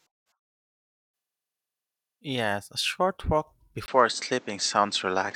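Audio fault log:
3.86 to 5.35 s, input switched to a poorer device: a 20 ms silence breaks the audio at 3.86 s. After it the sound turns dull, with nothing above 8.4 kHz, a level shift of roughly 5 dB and new background noise roughly 30 dB under the signal, likely because recording jumped to a narrower-band microphone. On a spectrogram a thin vertical gap precedes a flat ceiling at 8.4 kHz. The waveform shows a step in amplitude and a raised floor between phrases.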